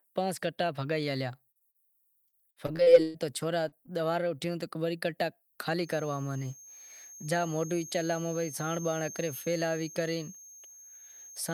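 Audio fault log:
1.51 to 1.76 s, short concealed packet loss: three quick dropouts at 1.51 s (about 40 ms missing), 1.59 s (20 ms) and 1.71 s (40 ms). The receiver papered over each hole by stretching the last bit of speech, so you get little smears or wobbles rather than silence.
3.68 to 3.89 s, short concealed packet loss: same again, 40 ms at 3.68 s and 20 ms at 3.86 s. Tiny stretches of patched speech that blur the flow.
2.28 to 3.16 s, repeated packet loss (robotic sound): here the holes come back to back, seven of them, the longest 119 ms, and roughly 37% of this stretch is made-up fill. Each patch repeats the previous sound before the next gap hits, so the speech turns choppy, with bits of it missing.
5.78 s to the end, feedback whistle: a thin, steady tone at 6.4 kHz sits about 15 dB under the speech and swells and fades slowly in level. It's likely a speaker-to-mic loop hovering right at the edge of feedback, ringing on one frequency without ever taking off.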